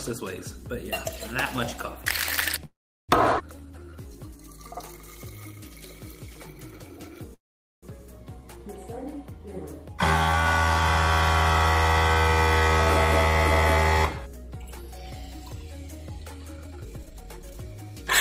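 At 2.65 to 3.11 s and again at 7.34 to 7.85 s, the sound stops with a brief fading tail, then silence of about 0.37 s and 0.45 s. It resumes where it left off. This is a call audio freeze, likely from packets delayed until the jitter buffer ran dry.

At 3.39 to 3.42 s there is a skip ahead. Roughly 150 ms is dropped, and the two sides join almost seamlessly.

From 3.60 to 4.39 s, a jitter buffer slow-down repeats pitch periods to refill the buffer. It adds 144 ms, so the sound plays at 83% speed and drags.

From 12.59 to 17.91 s, a jitter buffer speed-up trims pitch periods to cut excess delay. About 0.7 s is removed, and playback runs at 115% speed, sounding rushed.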